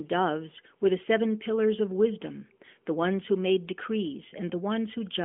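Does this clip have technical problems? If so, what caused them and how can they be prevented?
No, there are no technical problems in this speech clip. It has the narrow, telephone-like sound of the AMR narrowband mobile codec, with nothing above about 3.6 kHz and only light coding texture, consistent with its highest 12.2 kbps mode.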